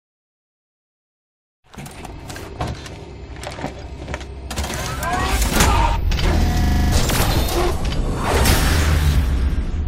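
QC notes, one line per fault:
3.82 s and 8.23–8.27 s, compressed frames skipped: whole compressed frames were missing from the file or rejected by the decoder as damaged, so playback jumps ahead by around 70 ms each time.
6.64–6.92 s, system hang loop: the system froze while the sound hardware kept cycling through its ring buffer, replaying one 40 ms piece seven times. The repeats come at 25 Hz, and around 300 ms of audio never plays.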